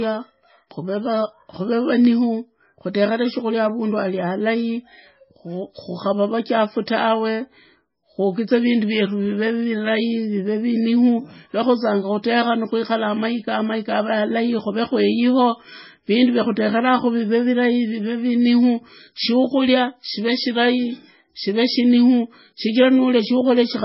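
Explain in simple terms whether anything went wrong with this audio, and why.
Yes, something went wrong, and it affects the whole recording from start to finish, about 24 seconds. The speech sounds dull and muffled because nothing above about 5.6 kHz survives, so the crisp edges of consonants are gone. The likely cause is heavy MP3 compression: the file was squeezed into very little data, so the encoder cut off the treble and discarded quieter detail, leaving the speech watery and smeared.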